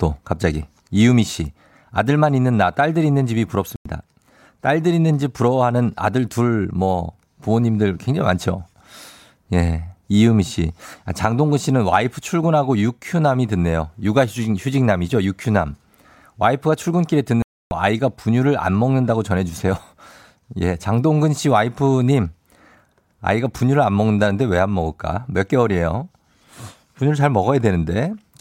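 A digital broadcast dropout occurs twice in this speech clip: the receiver lost valid frames and muted, leaving holes at 3.76 to 3.86 s (about 0.1 s, which fits three frames) and 17.42 to 17.72 s (about 0.3 s, which fits nine frames), where the sound is simply gone.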